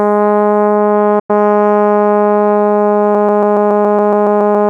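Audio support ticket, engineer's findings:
Digital broadcast dropout, 1.19–1.30 s: music fades out over about 8 ms, then silence; roughly 96 ms lost, consistent with three failed frames muted by the receiver.

Broken-record loop, 3.15 s to end: a 140 ms fragment repeats back to back, eleven times; likely a stalled player or stream resending its last buffer.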